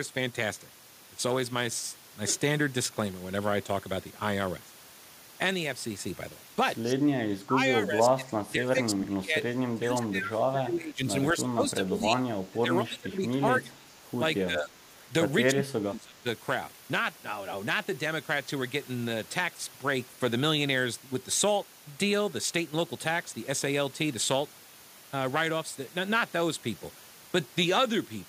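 At 6.85 to 6.95 s a brief echo leak appears: a faint copy of the speech returns 232 ms late, around 15 dB down, likely from a loudspeaker echo the canceller missed. On a spectrogram it shows as a weak, delayed repeat of the preceding harmonic pattern.

Speech suppressed in double talk follows at 7.26–7.58, 7.81–9.43, 9.74–11.06, 11.33–12.24, 12.5–13.94, 14.45–14.74 and 15.52–16.26 s. The speech dips, sometimes by roughly 30 dB, sounding choppy and dulled. The waveform shows sudden envelope hollows, and the spectrogram shows faded upper bands.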